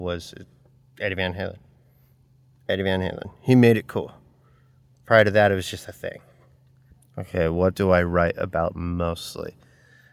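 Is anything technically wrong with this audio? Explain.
No, nothing in this speech recording stood out as a technical problem on listening.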